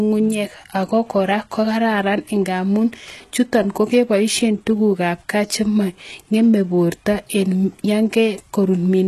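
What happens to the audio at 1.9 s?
At 1.9 s the speech carries the same HE-AAC compression damage that runs through the whole clip, likely from HE-AAC coding at a low rate consistent with about 16 kbps. Only the lower spectrum is truly coded. The treble is rebuilt by copying lower bands upward under a coarse envelope, so its harmonics don't line up with those below. Nothing survives above 12.3 kHz, and s sounds come out gritty, metallic or lispy.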